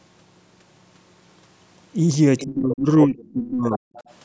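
Speech with two faults. The other side's voice leaking through appears at 2.38–2.46 s, 3.72–3.78 s and 3.96–4.13 s, roughly 15, 15 and 30 dB below the talker. On a spectrogram these show as faint, unrelated harmonic scraps, likely residual loudspeaker echo the canceller missed. Speech is suppressed in double talk at 2.45–2.89 s and 3.06–3.87 s, with the waveform envelope dropping by roughly 25 and then 35 dB. Both sides were likely talking, and the canceller turned everything down. On the spectrogram the talker's energy thins or gaps out. Above 8 kHz the spectrogram is empty throughout, from the call's microphone processing.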